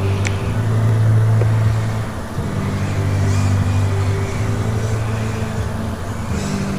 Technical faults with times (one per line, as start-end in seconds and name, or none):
0.89 dropped samples
4.32 dropped samples
5.63 dropped samples